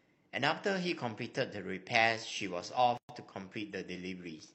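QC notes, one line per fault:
2.97–3.09 s, gap at a join of encoded pieces: a 116 ms gap opens mid-speech, its edges smeared by the codec, left by encoder start delay and last-frame padding kept at the join. Unlike a dropout, speech resumes exactly where it stopped, with nothing missing.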